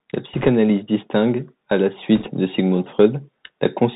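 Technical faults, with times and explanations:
Throughout: Bluetooth CVSD headset codec. The speech is squeezed into the narrowband headset path, which fits a 64 kbps CVSD stream, so nothing survives above about 4 kHz and the sound comes across dull and boxy. The codec sends a single up-or-down bit per sample with a step size that adapts, so it can't keep up with loud, bright moments. S sounds turn scratchy, and a fine granular hiss sits under everything. The damage is plainly audible.
0.33–0.49 s and 2.15–2.29 s: bit errors on a Bluetooth voice link. In these two short stretches the speech picks up a rushing, crackly noise, which points to something like a couple of percent of the bits on the link arriving flipped. You don't get sharp clicks, because each CVSD bit only nudges the signal up or down by one small step and the error fades out quickly. The result is a brief smear of crackle rather than a pop.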